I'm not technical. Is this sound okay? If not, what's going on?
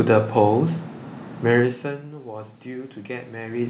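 No. From about 2.23 seconds to the end, the voice and the room noise behind it grow louder together, smoothly, over more than a second. This is automatic gain rising: the sound reaching the microphone suddenly got much quieter, so the system's automatic volume control turned itself up step by step to compensate, lifting everything at once. The talker shifting position, around 1.5 and 3.5 seconds, is natural and not part of the fault.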